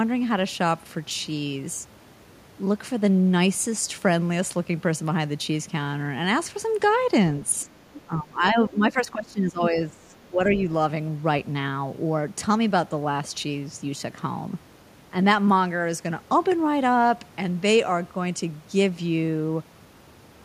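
At 7.6 to 7.65 s a faint second voice slips in under the speech, very low, around 35 dB down. This is the other side's voice leaking through. The far end was likely playing on a loudspeaker, and the echo canceller left a residue in the microphone. Straight after, from 7.65 to 7.69 s, the speech dips by about 10 dB for a brief moment. This is speech suppressed in double talk. Both sides were likely talking at once, so the canceller turned everything down. At 7.94 to 8.01 s the leaking voice returns, louder now, about 20 dB below the speech. Then from 8.06 to 10.59 s the talker is held down again. The drop reaches about 20 dB and adds up to around two seconds. At 10.54 to 10.61 s a last short scrap of the other side comes through, again about 20 dB down.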